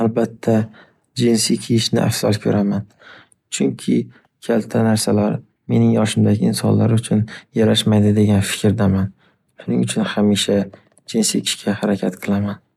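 Near the end of the speech, from 11.43 to 11.47 s, a brief glitch of about 40 ms, heard as a chirp, squawk, click or short hole, breaks into the sound. It comes from damaged data in a compressed stream: part of the encoded data at that point is corrupted, so the decoder cannot read those frames properly, loses its place, and produces garbled output until it finds the next valid frame header and resumes normal decoding.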